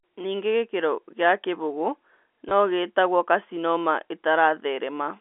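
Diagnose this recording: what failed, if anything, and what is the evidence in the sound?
Network: packet loss with last packet repeated from 2.49 to 2.51 s. The receiver replayed the previous packet to fill the 20 ms gap, producing a brief stutter.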